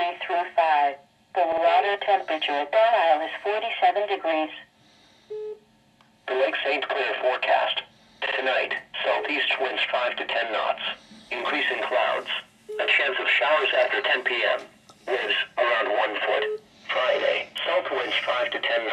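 Repeated frames occur at 1.52 s and again at 8.26 s. Each time, a 52.2 ms stretch of compressed audio was delivered two extra times. That stretch holds two frames. The decoder replays it, so the sound stutters briefly. Each repeat lengthens the audio by 104.5 ms.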